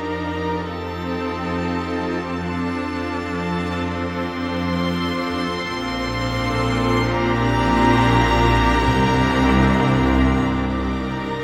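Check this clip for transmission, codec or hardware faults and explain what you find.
Nothing stands out as a fault anywhere along the way, so there's really nothing to flag on this one.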